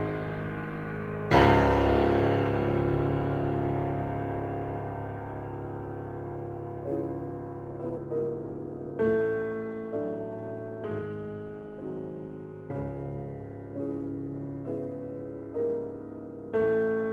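Between 7.97 and 7.99 s the audio makes a skip ahead: a stretch of roughly 0.7 s never reaches the output, and playback leaps straight from the material before the break to later material with no fill or silence between them. The join is almost direct, but the continuity is broken, because that stretch was dropped while later audio was already queued behind it.

Immediately afterwards, from 8.06 to 9.18 s, a jitter buffer speed-up follows. Having jumped ahead, the buffer still holds more than its target delay, so the receiver trims short pitch-period-length pieces again and again to drain it, removing roughly 150 ms in total. Over this span the sound plays at about 111 % speed with unchanged pitch, giving a rushed, slightly compressed feel before normal pacing resumes. Both events sit on the call codec's coding noise and an upper band edge near 12 kHz, consistent with Opus at around 20 kbps.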